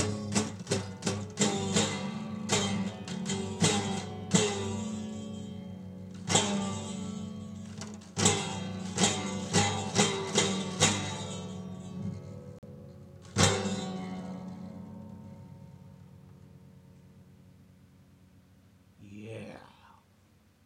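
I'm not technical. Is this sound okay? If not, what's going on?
No. From 12.59 to 12.64 s the sound cuts out, then resumes further along. This Bluetooth dropout likely comes from lost wireless packets.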